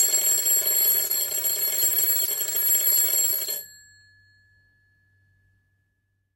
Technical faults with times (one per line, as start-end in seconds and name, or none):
1.07-1.11 short concealed packet loss
2.25-2.29 short concealed packet loss
3.45-3.48 short concealed packet loss